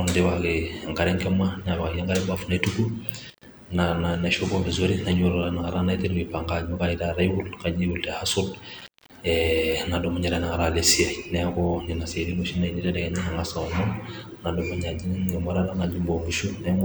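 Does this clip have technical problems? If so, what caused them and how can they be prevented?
Yes. Intermittent contact at 3.30 to 3.46 s and 8.79 to 9.17 s: a loose connection briefly opens, cutting the speech for 72 ms and 234 ms with crackle at each edge. Secure and inspect cables and plugs, replacing any worn connector, before recording.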